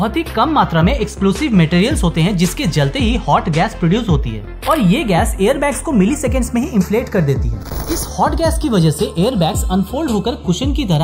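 A slow, sweeping flange runs through the whole sound, where the two sides have been summed to mono. These are channels drifting apart: separate clocks differing by roughly 30 parts per million let the inter-channel delay creep to about a third of a millisecond, dragging comb notches across the spectrum.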